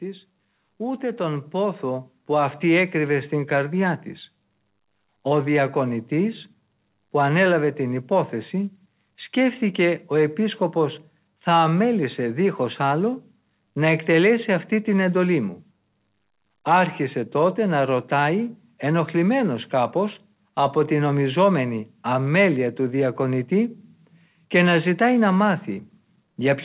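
From 0.05 to 3.84 s the automatic gain rises: the gain control judged the input too quiet and raised it by about 8 dB over nearly four seconds. Speech and background noise swell together, which separates it from a talker simply moving closer, heard through a call path with nothing above 4 kHz.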